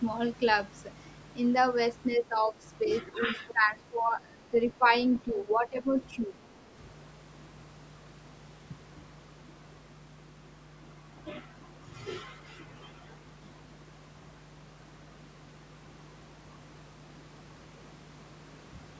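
A ground loop or a nearby transformer is coupling the 50 Hz power line into the signal path, so a mains hum runs under the whole recording. It is a steady low tone sitting roughly 20 dB below the speech, present through pauses as well as talking, and it gives the speech a constant droning floor rather than clean silence between phrases.

From 2.16 to 2.55 s the speech dips, most likely because the echo canceller could not tell the talker apart from sound arriving from the far end and turned the microphone signal down. This speech suppressed in double talk shows as a mild fade of about 5 dB. It then goes much deeper from 3.11 to 4.55 s, where the voice sinks by up to about 15 dB across roughly a second of affected audio. It then recurs in shorter bursts: a slight 5 dB dip at 4.78 to 4.85 s, about 10 dB from 5.32 to 5.87 s, and about 15 dB from 6.18 to 6.42 s. Each sounds as if the talker briefly drifted away from the microphone or was partly muted.

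Inside the long dip, from 3.48 to 3.52 s, a brief scrap of the other side's voice leaking through appears, around 20 dB under the speech. The loudspeaker sound that the canceller likely failed to remove reaches the microphone as a fragment, just a flicker of a second voice.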